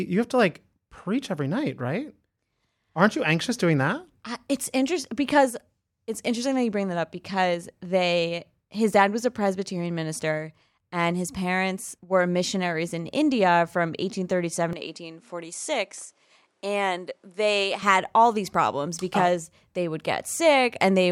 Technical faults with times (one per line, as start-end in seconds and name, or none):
14.73-17.82 input switched to a poorer device